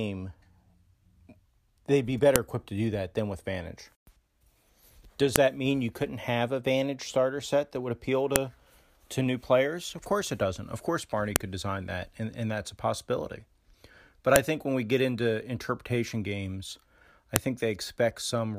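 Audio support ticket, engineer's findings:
Sharp clicks in speech at 2.36, 5.36, 8.36, 11.36, 14.36 and 17.36 s, every 3 s, e.g. just before "that mean you couldn't" and after "into interpretation games I". File header played as audio: WAV chunk headers not stripped at joins, header bytes reproduced as samples.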